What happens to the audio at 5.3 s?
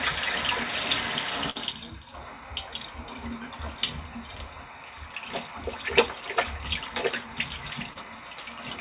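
Nothing goes wrong at 5.3 s: the sound carries on intact through that moment, passing through the G.711 mu-law call path as it does throughout, with its content kept below 4 kHz.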